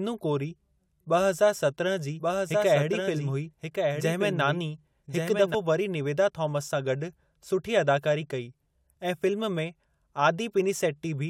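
A doubled audio track runs from 2.19 to 5.55 s: a second, full-band copy of the speech sits roughly a second behind the original and about 5 dB quieter, so each phrase is heard again over whatever follows it. The copy carries no decay or room colour and cuts in and out abruptly at both ends. The likely cause is the same signal being captured a second time through a slower path and mixed back in.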